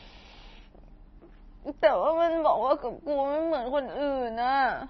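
From start to finish the speech sounds watery and swirly, with s sounds turning into metallic chirps, consonant onsets smeared, and no treble above about 5.9 kHz. This is most likely heavy MP3 compression at a bitrate that fits roughly 24 kbps. Starved of bits, the encoder cuts off the top band at a fixed frequency and drops quiet frequency lines that flicker on and off between frames, which produces the burbling texture.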